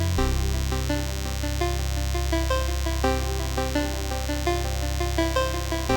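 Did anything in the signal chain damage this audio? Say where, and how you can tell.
Yes. There's DECT cordless phone buzz running the whole way through, a thin, steady 100 Hz buzz with lots of harmonics, fairly loud at maybe 10 dB under the programme. That's analogue-side pickup: a nearby DECT handset or base firing a radio burst every 10 ms, rectified somewhere in the wiring or input stage.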